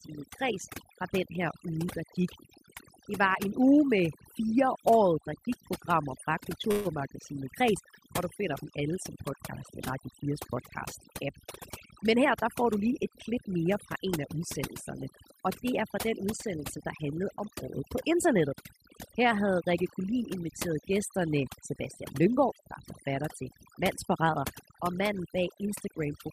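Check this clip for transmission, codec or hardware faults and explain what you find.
Three faults are present: one runs through the whole clip and two are short, timed events.

Overdone noise removal affects the entire clip. A noise reduction stage set far too aggressively is pulling down or muting individual frequency bands wherever they sit close to its noise estimate. The pauses collapse to near silence with twinkling specks. Unlike a codec's band-limiting, the damage comes and goes with level, not a fixed cut-off.

A call audio freeze occurs from 6.71 to 6.87 s, right after "der gik programmer fra". The last sound is stretched into a fading buzz or hiss for about 136 ms, likely because delayed packets emptied the jitter buffer. Speech then resumes exactly where it stopped, so nothing is lost, which separates it from a dropout that skips audio.

A jitter buffer speed-up runs from 12.04 to 14.58 s. 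The receiver trimmed many pitch-period-sized slices, about 150 ms in total, to shed built-up delay. The speech runs about 5% faster and sounds slightly hurried, yet the pitch stays unchanged, unlike a sample-rate error, which would shift pitch too.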